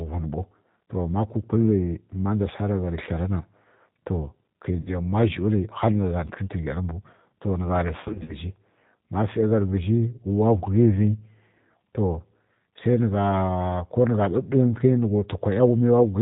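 The whole clip has the G.729 codec sound: nothing above 4 kHz, and the speech comes through rough and slightly synthetic, which fits an 8 kbit/s G.729-style low-rate codec. At 4.81 s there's a short gap, about 50 ms of lost audio. Here we get VoIP packet loss concealed by the speech codec: the decoder stretches the last pitch into a buzzy tone or coloured noise that fades. From 8.01 to 8.36 s it's worse, with losses scattered over roughly 280 ms, runs up to 30 ms, so the speech stays weak or distorted until it recovers.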